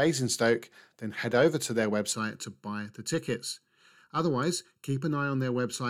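Speech that turns hollow and phasey from 2.12 s to the end, with fixed notches starting near 700 Hz. This is channel delay (comb filtering): one channel lags by a little under a millisecond, and summing to mono cancels evenly spaced frequencies.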